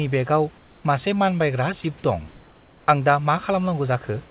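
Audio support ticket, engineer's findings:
Comfort noise in place of the background, 0.58–0.84 s and 2.28–2.88 s. Likely discontinuous transmission: the sender went quiet in pauses and the receiver synthesised background. The real room noise, about 29 dB under speech, turns into a flat, featureless hiss, about 3 dB and then about 1 dB quieter.

Sound dropped by the voice detector, 1.82–1.84 s. The sender's detector likely misread a quiet speech moment as background and stopped sending. About 10 ms of speech is lost and replaced by the same synthetic steady noise before the speech resumes. The surrounding audio is band-limited to 4 kHz, consistent with a narrowband G.711 call path.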